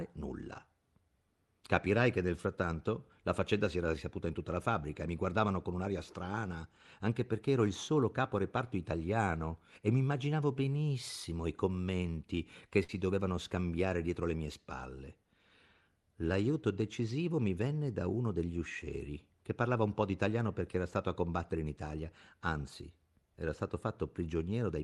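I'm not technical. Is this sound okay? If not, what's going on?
No. At about 12.83 seconds, just after "benissimo i commenti che", the speech briefly turns into a short held buzz that fades, and when it picks up again at 12.98 seconds with "dovevano scambiare dietro le", a sliver of speech is simply gone. This is a burst of packet loss: a few chunks of this call audio were lost or arrived too late, so the receiving end stretched out the last sound for about 50 ms, then skipped ahead.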